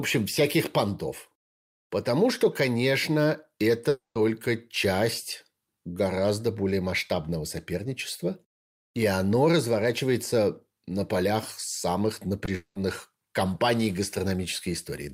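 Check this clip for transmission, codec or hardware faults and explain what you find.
Yes, there's some network trouble in this speech clip.

Right after "что конечно", from 3.89 to 4.17 s, the sound carries on as a fading buzz and then drops to silence for about 140 ms before resuming with a chunk gone. That's likely a long network dropout, with the receiver stretching the last sound until it gave up.

There's a short concealed packet loss at 12.45 to 12.49 s. About 20 ms never arrived and got patched by extending the previous sound, which leaves a quick smear.

Just after that, from 12.55 to 12.77 s, likely another long network dropout takes out about 200 ms. This time the fill covers the whole gap with no silence, so you hear a drawn-out buzz before the audio picks back up.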